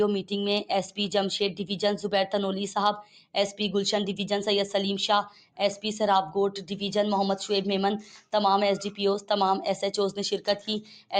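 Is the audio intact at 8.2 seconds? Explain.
No. From 8.02 to 8.33 s the noise suppressor cut this sound, pulling it down by up to about 9 dB over roughly 150 ms in total. It misread the sustained part as noise, so the level sags and the decay is clipped short while sharper onsets survive.

This sits on a noise suppressor applied to music or sounds across the whole clip. A speech-oriented suppressor treats steady tones and tails as noise, swinging the level by around 5 dB, which makes the audio pump and thin rather than hold steady.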